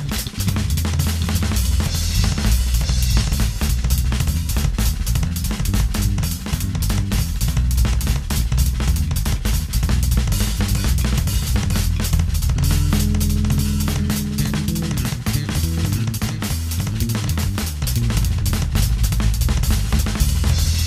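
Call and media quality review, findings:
Doubled audio track, present throughout. Every sound repeats about one second later, at roughly the same level as the original. The copy is full-band and clean, with no decay or room colour, so it is not an echo. Likely cause: the same feed captured twice, one path running about a second behind, or an edit leaving two copies out of step.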